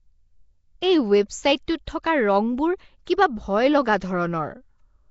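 Nellymoser compression runs through the whole speech clip: a rough, hissy halo and smeared, underwater tone, with nothing above 7.7 kHz. It likely comes from Flash's Nellymoser Asao codec at a low fixed rate, which fits about 32 kbps, starving weak bands and filling them with noise. Pre-echo appears at 0.81, 2.03, 3.05 and 4.00 s, each a brief hiss of 10 to 18 ms just ahead of a sharp onset. The codec spreads its quantisation noise across each block, so noise sized for the attack leaks into the quiet moment before it and softens the attack.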